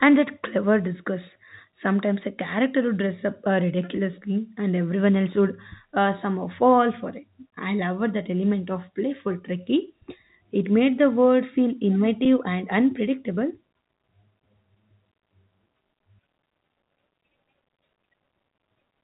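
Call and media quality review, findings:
No faults found; telephone-band speech, nothing further to report.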